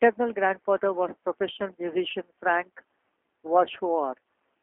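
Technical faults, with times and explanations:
Throughout, G.729 codec: speech sounds rough and synthetic, fitting 8 kbit/s pulse-based rebuilding; the spectrogram shows a 200 Hz–3.4 kHz band, empty above 3.5 kHz.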